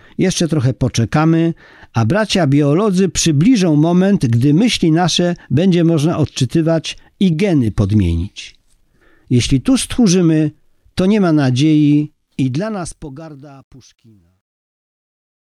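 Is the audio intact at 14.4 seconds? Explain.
No. At 14.4 s the speech sits inside truncation distortion on a fade, running from 12.27 s to the end and worst from 13.88 s. The fade-out stage drops bits without dither, consistent with roughly 11-bit resolution, so the quiet tail turns gritty.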